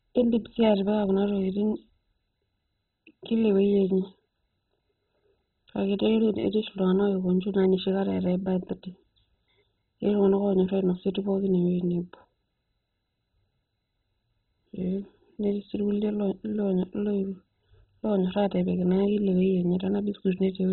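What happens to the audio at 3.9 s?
MP2 compression damage is present at 3.9 s, as it is across the whole clip; the speech there sounds dull and gurgling, which is likely the work of an MPEG Layer II encoder starved of bits. That codec divides the signal into 32 sub-bands and shares out a bit budget; at a rate that points to roughly 16 kbps, every band above 4 kHz is switched off and the remaining ones are coarsely quantised, giving the heavy, granular distortion heard here.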